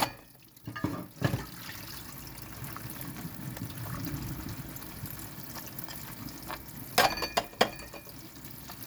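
No technical faults can be heard anywhere in this recording of sounds.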